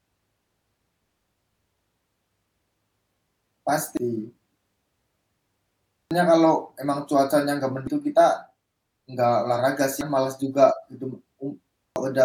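At 3.97, 6.11 (just before "kalau emang cuacanya enggak"), 7.87 (between that phrase and "kita enggak olahraga"), 10.01 (right after "kita enggak olahraga") and 11.96 s, brief glitches break into the speech. Each is damaged data in a compressed stream: corrupted bytes make the decoder misread a frame, lose sync and hunt for the next header.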